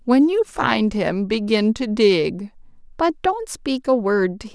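A speech clip whose first 2.62 seconds suffer from a wrong sample rate: the audio runs at about 0.92 of normal speed and sits roughly 1.5 semitones low, sounding slightly slow and deep, which fits 24 kHz material played back at 22 kHz without conversion. On a spectrogram the harmonics and formants in that section sit about 8% lower and stretch in time, stepping back up to their normal spacing at 2.62 s.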